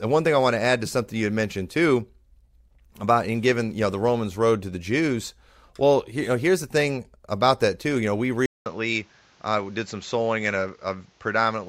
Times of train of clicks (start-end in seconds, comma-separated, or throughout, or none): none